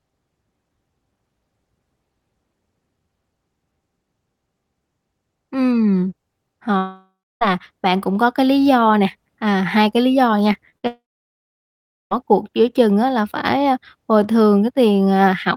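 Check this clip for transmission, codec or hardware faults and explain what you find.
The clip has transmission faults: two long dropouts, two short concealed packet losses and one burst of packet loss, from 6.77 s onward.

Long network dropout, 6.77–7.43 s and 10.87–12.13 s: likely a network outage. About 0.64 s and 1.24 s of audio never arrive. The receiver extends the last sound as a fading buzz or hiss, then leaves silence of about 0.29 s and 1.1 s before the audio resumes further on.

Short concealed packet loss, 10.53–10.56 s and 10.70–10.74 s: 20 ms each is missing. The decoder bridges each hole by continuing the preceding sound, heard as a brief smear or wobble.

Burst of packet loss, 10.78–10.85 s: about 40 ms in a row is lost. The receiver continues the last sound and turns it down, so it becomes a short fading buzz or hiss before the audio picks up again.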